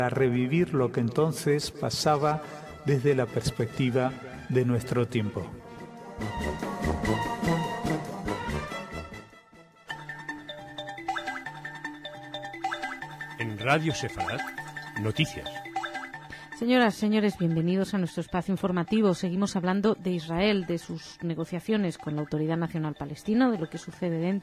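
No technical faults can be heard anywhere in the clip.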